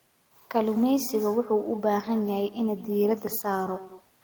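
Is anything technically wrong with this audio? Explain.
Yes. Throughout the speech there is echo with no canceller: the far end is playing the call over a loudspeaker, its microphone captures that playback, and nothing subtracts it, so the talker's own speech returns after the network round trip. Each phrase is trailed about a fifth of a second later by a copy roughly 18 dB quieter and thinner. A waveform shows faint repeated envelopes behind each burst; a spectrogram shows ghost copies of every syllable's pattern, shifted later in time.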